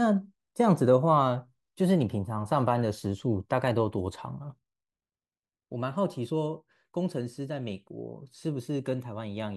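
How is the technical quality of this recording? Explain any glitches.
The recording has one clear fault. From 4.59 s to the end, the speech drops abruptly by about 6 dB and stays there: one channel drops out. The likely cause is one side of the stereo pair going silent. When the two channels are summed to mono, material common to both loses half its contribution, hence the 6 dB step. Anything carried only by the lost side vanishes, and the speech sounds suddenly quieter.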